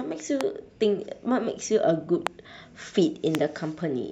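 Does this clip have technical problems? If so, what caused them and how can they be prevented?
Yes, sharp loud pops cut through the speech at 0.41–0.43, 2.27–2.29 and 3.35–3.37 s, each about 20 dB above it, likely from voltage spikes from switching, static or a driver glitch. Secure connections, ground equipment and avoid switching gear while recording.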